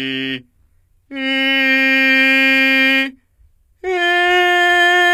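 From start to finish the music carries the sound of HE-AAC compression, likely from a low-bitrate encode. The damage is plainly audible. Only the lower spectrum is truly coded. The treble is rebuilt by copying lower bands upward and shaping them roughly. Its harmonics no longer line up with the real ones, so the highs sound gritty and metallic. Nothing reaches above 14.8 kHz. The sound fits a rate of about 24 kbps.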